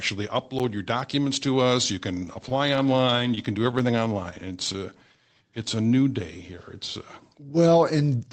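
At 0.59 s, just before "your documents to us", a block of digital silence about 11 ms long drops in. The output buffer likely wasn't filled in time, which fits a 512-sample buffer, so the sound cuts out and back with hard edges and a tick or dip.

From 2.15 s, right after "documents to us you", until 5.03 s, the audio shows repeated stalls (stutter). Packets kept arriving late and the jitter buffer ran dry again and again. The receiver extended the last sound for each gap, up to 18 ms, about 271 ms in total. Nothing is lost, but the flow drags and catches.

Overlapping this, from 4.34 s to 6.38 s, ending just before "here it's", comes a jitter buffer slow-down. To rebuild its reserve, the receiver repeated pitch periods and pause fragments, adding about 221 ms. Playback runs at 90% speed at unchanged pitch, so sounds stretch out.

Inside that stretch, at 4.58 s, a second block of digital silence, about 3 ms long, cuts in. 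It leaves a brief click rather than an audible hole. All of this sits on the Opus call path, which limits the audio to 8 kHz.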